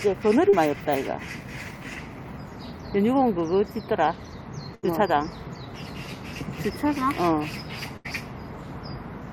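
At 0.49 to 0.55 s there is a short concealed packet loss: about 40 ms of audio arrived too late, and the receiver bridged roughly 33 ms by extending the preceding sound before merging back, leaving a brief smear or wobble.

At 4.75 to 4.85 s and again at 7.97 to 8.07 s, a burst of packet loss removes about 80 ms each time. The receiver stretches the last sound across the gap while fading it, giving a held buzz or decaying hiss, then resumes with that stretch missing.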